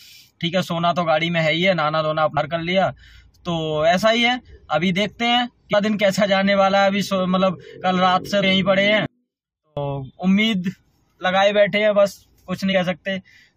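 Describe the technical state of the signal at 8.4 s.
At 8.42 s, damaged data in the compressed stream makes the decoder lose frame sync, producing a brief garbled blip rather than the clean single-sample spike of a plain click.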